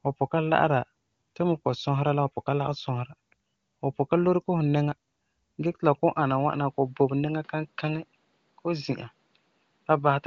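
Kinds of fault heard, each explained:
Input switched to a poorer device: At 6.17 s the speech suddenly loses its top end for the rest of the clip. Nothing is heard above 5.5 kHz after that point, so the voice turns duller and boxier. There is no gap at the change, and the level stays about the same. A faint new noise floor appears, far below the speech. The likely cause is a move to a narrower-band microphone or headset profile, while the AMR-WB coding itself sounds clean.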